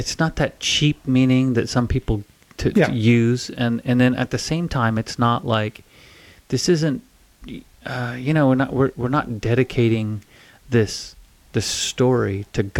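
No audible technical faults occur anywhere in this speech recording.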